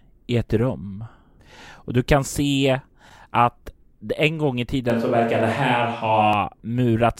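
Switch to a distant microphone, from 4.90 to 6.33 s: the speech suddenly turns roomy and hollow, with thinner bass, then snaps back. Loudness stays about the same, with room noise roughly 35 dB below the speech. The likely cause is the close microphone dropping out, leaving only a farther pickup.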